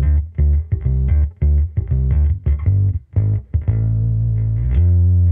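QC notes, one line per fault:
No faults heard anywhere in the clip.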